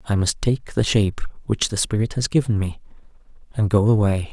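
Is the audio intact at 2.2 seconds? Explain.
Yes, the audio at 2.2 seconds is intact, with no dropout, click, distortion or other fault at that moment.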